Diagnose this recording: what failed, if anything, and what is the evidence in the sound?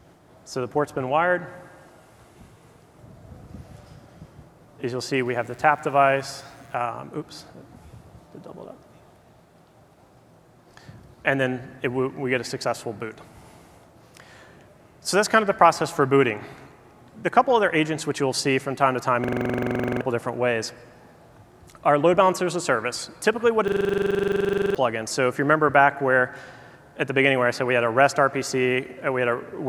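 Mains buzz enters in the analogue wiring from 5.25 to 6.75 s. A raspy 60 Hz buzz sits about 35 dB below the signal. Sharp switching spikes from a dimmer, rectifier or unshielded run are picked up twice per mains cycle, and their energy spreads into many harmonics. On a spectrogram this shows as a comb of evenly spaced horizontal lines at multiples of 60 Hz, reaching up to several kHz. In the waveform, narrow spikes repeat every 8.3 ms.

A system hang loop, a driver or buffer failure, occurs twice: from 19.24 to 20.01 s and from 23.68 to 24.75 s. Each time the host stalled while the audio hardware kept replaying the same ring buffer. A 42.67 ms slice repeats exactly, which fits a 2048-sample buffer. That produces a rapid repetition at 23.4 Hz, with about 18 and then 25 repeats. Roughly 0.7 s and then about a second of real audio are lost. The waveform shows identical tiled segments, and the spectrogram shows vertical stripes at the loop rate.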